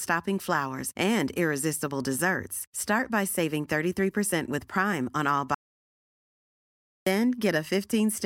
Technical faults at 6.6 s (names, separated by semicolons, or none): audio dropout to silence